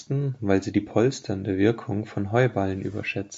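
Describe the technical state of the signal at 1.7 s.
At 1.7 s the speech is intact, with no fault, and the only processing audible is the normal call microphone processing, which trims the lowest bass.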